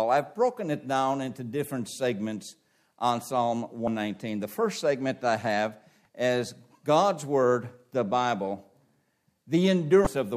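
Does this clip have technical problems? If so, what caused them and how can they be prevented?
Yes. Damaged data in a compressed stream appears three times: from 3.84 to 3.88 s, at 6.05 s, and from 10.03 to 10.07 s. Each is a brief blip or chirp. At these points the stored bytes were corrupted, so the decoder either misread those frames or rejected them, lost its framing, and skipped ahead to the next valid header. Storing or transferring the file with checksums and error-protected containers, and re-copying from a verified source, prevents this.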